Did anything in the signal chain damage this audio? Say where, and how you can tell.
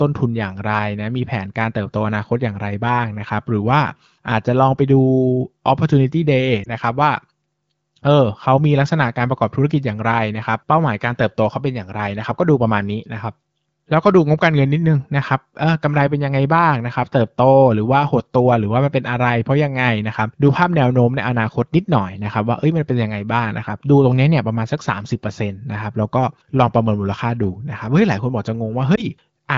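Yes, the damage happens on the network or radio stage: lost AMR speech frames at 6.63 s and 28.96 s. Each is a brief dip or warble lasting under a tenth of a second, which fits a single missing 20 ms frame. The wideband AMR decoder (its 15.85 kbit/s coding is audible as clean HD Voice) replaced the frame by repeating the previous pitch and vocal-tract settings at reduced gain. On a waveform it shows as a short amplitude sag. On a spectrogram it is a thin column where the harmonics are held flat and dimmed before normal detail resumes.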